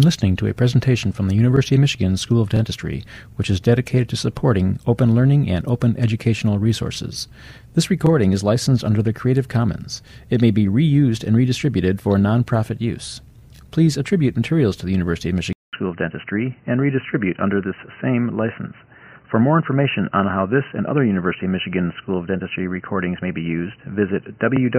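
At 15.53 s a brief gap of about 200 ms gives way to dull, band-limited sound with nothing above 3 kHz and faint new background noise, likely from an input switched to a poorer device.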